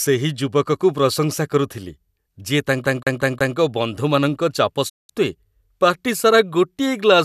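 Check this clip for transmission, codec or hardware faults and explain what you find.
Two faults stand out in this speech clip.

From 2.85 to 3.57 s, the CD is stuck on one turn. A scratch keeps throwing the laser back a track. The same 180 ms repeats four times, with brief mutes between.

From 4.88 to 5.11 s, there is a digital broadcast dropout. The receiver mutes after a 20 ms fade, and about 192 ms of speech is lost. This fits eight failed frames.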